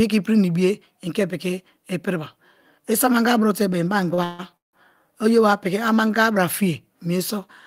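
At 4.14 s a packet arrived late and the jitter buffer briefly ran dry, causing a short stall from a late packet. Until the packet showed up, the receiver extended the last stretch of sound by about 34 ms, then resumed from the same point. Nothing is lost, but the sound just before 4.21 s is held slightly too long, with a faint buzzy dip, and everything afterwards runs about 34 ms later.

Two call audio freezes follow. From 4.24 to 4.42 s, packets were likely delayed in transit and the buffer emptied again. The receiver kept extending the previous sound for about 150 ms, heard as a fading buzz or hiss that never drops to silence. From 4.57 to 4.76 s the same likely stall lasts about 164 ms, and almost all of it (about 160 ms) is silent. In both freezes the audio picks up where it stopped with nothing missing, so each inserts a gap and pushes the rest of the speech later.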